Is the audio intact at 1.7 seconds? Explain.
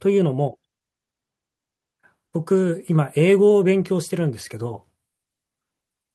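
Yes, at 1.7 seconds the speech runs through cleanly, with no dropout, click, distortion or other fault to be heard at that moment.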